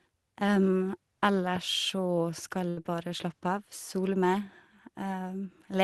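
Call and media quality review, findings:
Burst of packet loss, 2.69–2.79 s: last sound held and fading for about 75 ms, then resumes with about 80 ms skipped. Receive-side jitter buffer concealment. Unlike a plain dropout, no silent gap, and the audio jumps ahead.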